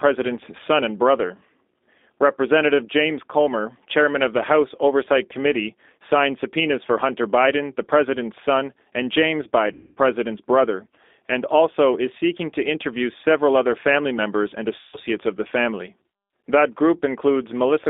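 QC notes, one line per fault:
throughout, G.729 codec: 8 kbit/s coding passes only about 250 Hz to 3.6 kHz, so speech sounds rough and synthetic; the spectrogram is empty above 3.6 kHz.
9.73–9.99 s and 14.79–14.98 s, VoIP packet loss concealed by the speech codec: 240 ms and 140 ms of audio were lost, the first ending just before "brother and also is", the second between "other family members and" and "of the family". The decoder filled each gap by extending its last sound into a fading buzzy tone or coloured noise. On a spectrogram this shows as flat, smeared energy, and the waveform shows a decaying envelope.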